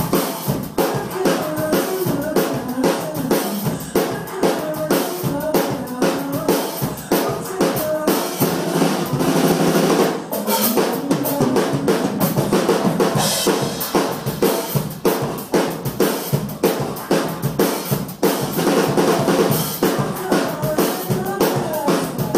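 Interference from nearby equipment, or a faulty connection or power supply, is the likely source of a train of clicks from 19.08 to 21.26 s: about ten similar pulses, irregularly spaced at roughly 4.15 per second, ticking over the audio at about 5 dB above it.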